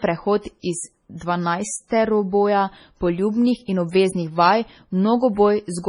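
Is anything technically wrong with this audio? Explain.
Yes. Throughout the speech there's a coarse, smeared quality, likely low-bitrate audio saved at a high bitrate: damage from an MP3 pass near 24 kbit/s that the later high-rate encode simply preserved.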